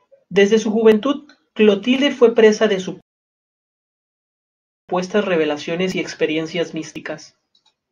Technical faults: rebuffering stall

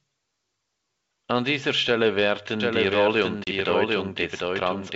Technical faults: doubled audio track; packet loss on an ADPCM call

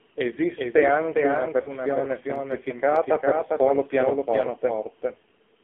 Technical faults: doubled audio track; AMR narrowband mobile codec; lost AMR speech frames

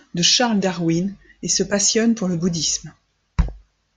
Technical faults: MP2 compression; DAB burbling

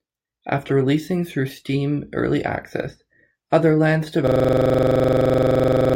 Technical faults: system hang loop

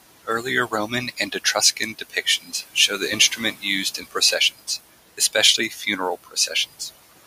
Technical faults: noise suppressor artifacts; speech cut by the noise suppressor

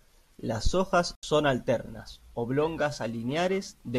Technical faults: digital broadcast dropout; periodic clock jitter

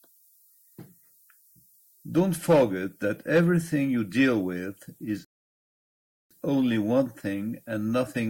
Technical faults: low bit depth with noise shaping; rebuffering stall

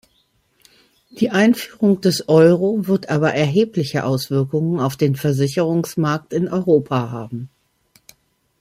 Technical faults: none

